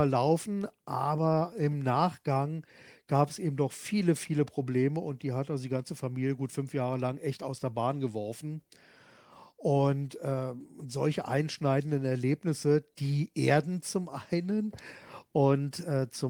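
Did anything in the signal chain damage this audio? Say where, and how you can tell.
No, nothing audible in this speech points to damage at any stage of the chain.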